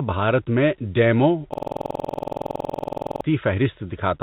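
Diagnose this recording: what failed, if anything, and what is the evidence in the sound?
A system hang loop at the driver or buffer stage: right after "بھارت میں ڈیموں", from 1.54 s to 3.22 s, the same 46.44 ms slice repeats 36 times at about 21.5 Hz, a rough machine-gun stutter. The driver stalled while the hardware replayed its ring buffer, which fits a 2048-sample buffer. The waveform shows identical repeated blocks, and the spectrogram shows evenly spaced vertical stripes within the 4 kHz band of the G.711 call path.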